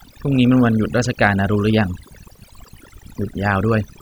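Throughout the speech, overdone noise removal leaves the background near silent but sprinkled with twinkling specks. An overly strong reducer suppresses separate frequency bands near its noise estimate, unlike a gate, which mutes everything at once.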